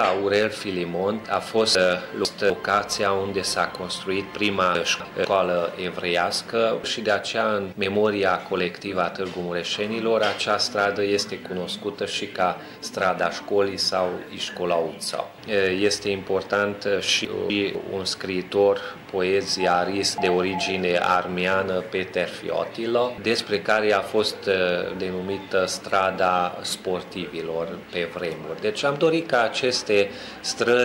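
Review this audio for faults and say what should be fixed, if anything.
Chunks out of order at 1.75–2.5 s, 4.75–5.25 s and 17.25–17.75 s: a 250 ms block plays two chunks late in the first and one chunk late in the others, giving jumbled sound. Unlike dropouts or repeats, nothing goes missing or plays twice. Fix this by reordering chunks by sequence number before playback or writing.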